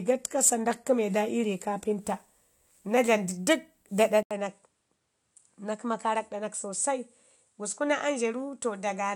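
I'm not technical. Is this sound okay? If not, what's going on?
No. For the first 2.0 seconds the speech sounds muffled and artificial. That is an adaptive stream starting at a low bitrate, then jumping to better quality without a gap.

At 4.23 seconds there is a brief silence, about 80 ms. Then the speech turns duller, a little quieter, with faint new background noise. The likely cause is the input switched to a poorer device.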